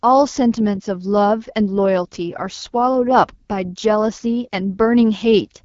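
From start to end the speech carries AMR wideband (HD Voice) codec damage: rough, raspy texture with nothing above 7.3 kHz, suggesting a low rate like 8.85 kbit/s rather than simple band-limiting.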